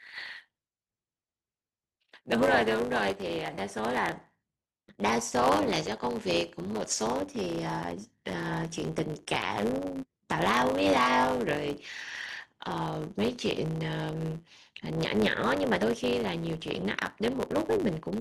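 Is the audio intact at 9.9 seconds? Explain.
No. At 9.9 seconds the speech is still under the block size mismatch (truncated) fault that runs through the whole clip. One stage hands over blocks longer than the next stage takes in, so the tail of every block gets dropped. You hear it as a steady buzz at about 100 Hz, the block rate, and the speech runs about 1.07 times fast at roughly normal pitch. That pattern fits 512-sample blocks being written.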